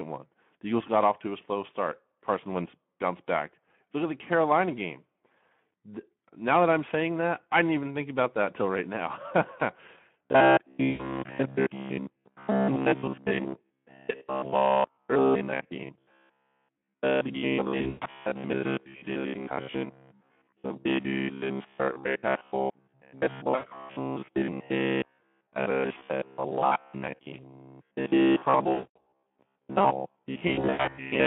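From the start, the speech sounds hoarse, grainy and narrow, held between roughly 150 Hz and 3.4 kHz. That is the Speex codec at about 11 kbps. Its CELP coder has too few bits to rebuild the excitation cleanly, so the voice turns noisy and rough.

From 10.26 s to the end, the sound takes on a rigid, metallic buzz near 67 Hz that still loosely tracks the speech. This is robotic sound from repeated short buffers. Each repeat lasts about 15 ms, which matches that buzz pitch. It is likely caused by audio arriving too seldom, so most of the stretch is made of repeated fragments while real audio is skipped.

Layered on top are brief, fading smears at 10.89–11.16 s, 17.77–18.09 s, 23.55–23.66 s, 28.73–28.99 s and 30.47–30.99 s. These are VoIP packet loss concealed by the speech codec. About 100 ms, 200 ms, 80 ms, 220 ms and 220 ms of audio go missing in these five events. At 17.77 s the losses are scattered, with the longest run about 120 ms, and at 30.47 s the longest run is about 100 ms. 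In each gap the decoder stretches its last pitch and filter while the level drops, and the voice stays weak briefly after audio resumes.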